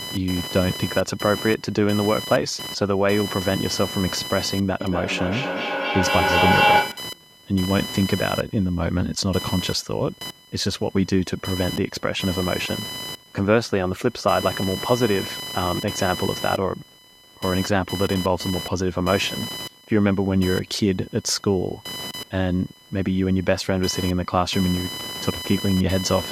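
Computer activity noise runs throughout: processor and peripheral load disturbs the audio circuit's shared ground, adding a buzzy, roughly 1 kHz chirping well below the speech.

From 4.8 to 7.2 s, a feedback howl occurs: a second device on the call loops the loudspeaker back into the microphone, building a tone near 1 kHz, with the loop repeating every fifth of a second, that peaks about 3 dB above the speech.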